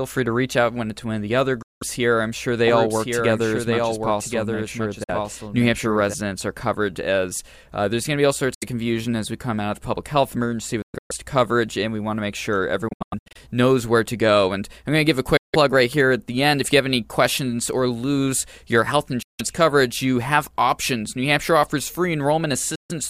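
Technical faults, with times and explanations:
1.62–1.83 (between "of the other" and "here I'm sure they"), 5.04–5.10, 8.54–8.64 (between "going to be all" and "confusion as we come"), 10.82–11.11, 12.88–13.37, 15.37–15.56, 19.22–19.41, 22.75–22.92 s, Bluetooth dropout: hard-edged silences from about 50 to 300 ms, and the 10.8 and 12.9 s ones come as broken clusters. The sound picks up further along as though it had kept playing, likely because packets reached the headphones too late and were discarded.
2.70–6.14 s, doubled audio track: after "here I'm sure they" a dry full-band copy, about 5 dB down, trails roughly a second behind until "are covered". It switches on and off abruptly, likely from a slower second capture path.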